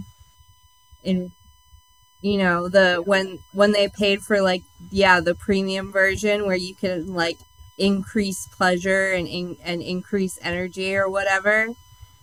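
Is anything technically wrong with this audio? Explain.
Yes. USB whine runs the whole way through: a steady 1 kHz tone sitting roughly 35 dB under the speech, from USB's 1 ms frame current leaking into power or ground.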